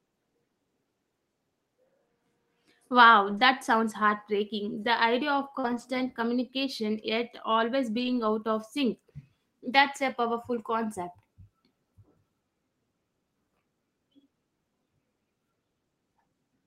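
Lost packets rebuilt from error correction come first at 3.29 to 3.39 s, just before "sounds heartbreaking". Roughly 60 ms of audio, which points to about three packets, went missing, and the decoder played the low-bitrate backup copies that later packets carried. There is no silence, but a rough, grainy patch. At 5.59 to 5.66 s, after "idea of", comes a short concealed packet loss. About 40 ms never arrived in time, so the receiver extended the preceding sound to fill the hole and then blended back into the real audio, leaving a brief smear. It runs straight into another error-correction rebuild at 5.64 to 5.82 s, before "communication yet always", where about 100 ms of backup copies make the audio coarser and noisier. The last and longest rebuild, at 8.00 to 8.26 s, replaces about 140 ms with the same rough, low-bitrate texture.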